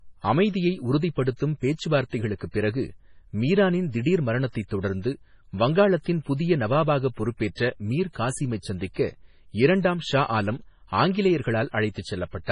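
Throughout, the speech sounds watery and swirly, with nothing above 10.5 kHz. This is likely heavy MP3 compression, consistent with a bitrate near 24 kbps.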